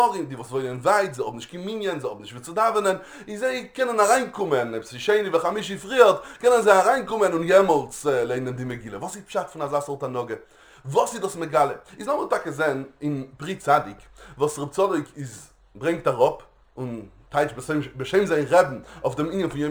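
Throughout, crude rate conversion, consistent with unfiltered sample dropping from 48 to 44.1 kHz, leaves gritty inharmonic fizz about 30 dB down under loud, high sounds.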